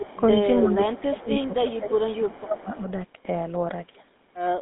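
Throughout, the speech passes through the GSM full-rate codec, which rebuilds the voice from a vocal-tract model driven by coarse pulses, consistent with its 13 kbps rate. The result is a plainly buzzy, gravelly texture in a narrow 200 Hz to 3.7 kHz band, with nothing above 3.8 kHz.

From 0.00 to 0.18 s, 0.62 to 0.67 s, 1.11 to 1.25 s, 1.74 to 1.79 s and 2.08 to 2.59 s, there is an echo leak, likely from a loudspeaker-side echo canceller letting residue through. A copy of the voice returns about 0.31 s late, clearest at 0.62 s and faint by 1.74 s.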